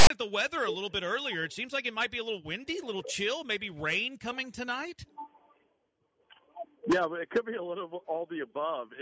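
From 0.0 to 0.10 s the audio opens with file tags played as audio: tag text decoded as samples gives a hard-edged, offset rasp, and the zero padding plays as silence.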